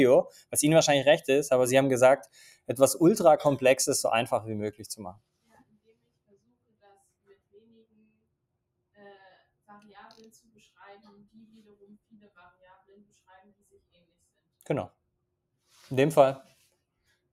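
Throughout, a speech-tuned noise suppressor applied to music or sounds pumps the level by a few decibels; unlike compression, attacks pass while sustained material and tails sink. Sound cut by the noise suppressor dips at 0.26–0.55, 2.19–2.71, 5.43–6.96, 7.24–8.25, 11.05–12.38, 12.63–13.11 and 13.44–13.78 s, by up to about 21 dB. Decays are cut short rather than fully muted as in a dropout.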